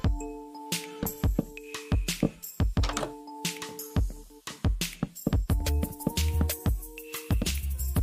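The audio has a drift correction step from 6.10 s to 7.73 s. Playback suddenly runs 5.57% fast, raising pitch by 94 cents, close to a semitone, then drops back to the original rate. This is likely a clock-matching stage changing rate in one jump to rebalance its buffer. Unlike wow or tape-speed drift, which glide continuously, the shift holds steady between abrupt changes at both ends.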